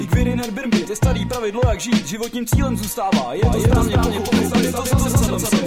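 A second, slower capture path or a misaligned edit has likely mixed the audio in twice, producing a doubled audio track from 3.44 s to the end. A full-band copy trails the original by about a fifth of a second at roughly equal loudness, starting abruptly with no decay or room colour.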